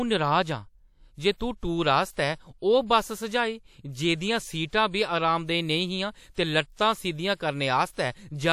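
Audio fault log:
7.02–8.02 s: periodic USB or driver dropouts. About three ticks land every 0.5 s across this span. Each is a tiny gap, a small fraction of a millisecond, where the audio drops to silence. Something in the background stalls the USB link or the audio driver on a fixed schedule, so a sliver of samples never arrives. The sudden break in the waveform clicks. The ticks are heard only while speech is present.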